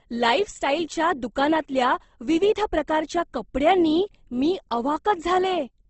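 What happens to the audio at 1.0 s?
At 1.0 s the speech carries the same damage it has for the whole clip: plainly audible Opus compression, likely from an encode in the music (CELT) mode. Nothing sounds above about 8.2 kHz, so the top end is gone, and the bands below it sound rough and grainy rather than swirly. The encoder has run out of bits and has filled bands with folded or noise-like content, a sound that fits a rate of about 16 kbps.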